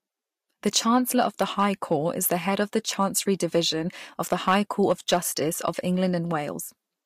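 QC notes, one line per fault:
0.76–1.93 s, hard clipping. The speech is driven about 4 dB past what the signal path can pass. Peaks are cut flat. The squared tops add harmonics high in the spectrum, so loud syllables take on a harsh fuzz.
4.21–5.17 s, hard clipping. The overload is about 5 dB, the heaviest here. More of each waveform is flattened, so the grit is thicker.
5.68 s, hard clipping. The peaks overshoot by about 2 dB and are sliced off. It is heard as a brief crackle.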